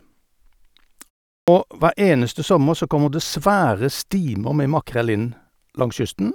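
At 1.35 s, coming out of a pause of about 0.33 s, the speech suffers a clipped start after a pause. The output path went idle during the gap and took roughly 0.13 s to wake, so the onset of "hver eneste sommer så" is swallowed and the phrase bursts in abruptly, missing its first sounds. What sets this apart from muted pauses, where the background falls silent during gaps but speech returns intact, is that actual speech is lost here.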